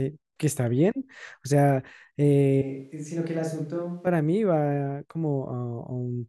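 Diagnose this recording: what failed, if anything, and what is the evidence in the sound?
Switch to a distant microphone, 2.62–4.07 s: speech abruptly turns roomy and thin, about 10 dB quieter and noisier. The close mic's analogue feed likely dropped out.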